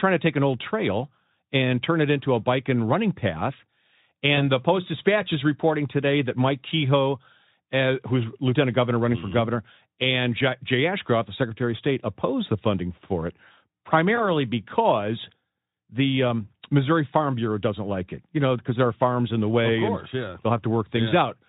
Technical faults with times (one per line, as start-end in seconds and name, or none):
4.35-4.44 VoIP packet loss concealed by the speech codec
14.16-14.26 VoIP packet loss concealed by the speech codec